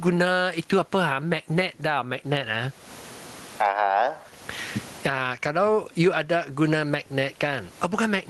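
Gain pumping runs throughout: the gain swings by roughly 25 dB, ducking under each loud syllable, likely from gain set far too high feeding a fast limiter. The waveform shows flattened, even peaks.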